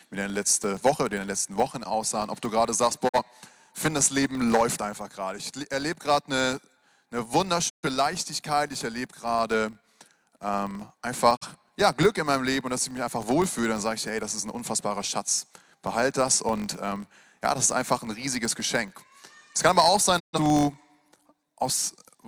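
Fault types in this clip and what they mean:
Filter restarted on every block: each 1024-sample block starts from silence, leaving a tick at its edge, a 46.9 Hz buzz seen as evenly spaced vertical lines tracking signal level.
Digital broadcast dropout: lost frames mute the sound with 20 ms fades, about 43 or 128 ms each, showing as flat-line gaps in the waveform and blank columns on a spectrogram.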